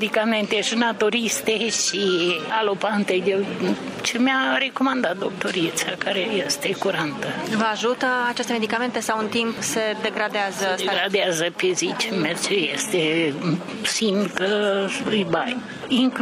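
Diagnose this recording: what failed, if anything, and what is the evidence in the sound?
Network: the adaptive stream fell to a lower bitrate at 12.58 s without a gap. From there, nothing above 12.3 kHz survives.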